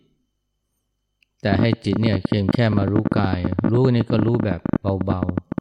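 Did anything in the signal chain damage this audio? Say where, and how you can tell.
Yes. A train of clicks runs from 1.53 s to 5.59 s: sharp, near-identical ticks at about 15 per second, unevenly spaced, around seventy in all, standing well above the speech level and audible in the pauses too. Identical pulse shape with no relation to the speech points to something outside the recording itself, likely electrical interference coupling into the analogue wiring or an interface intermittently failing, injecting a spike each time it misfires.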